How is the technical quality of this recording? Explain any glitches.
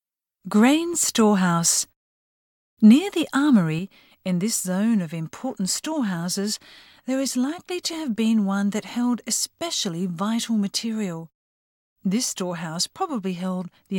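The recording has one clear fault that lasts from partway through to the end. At 3.79 s one channel drops out, most likely one side of the stereo pair losing its signal. When the channels are summed to mono, anything shared between them suddenly falls by about 6 dB, and any sound carried only by the missing side vanishes. The result is an abrupt step down in loudness that persists to the end of the clip.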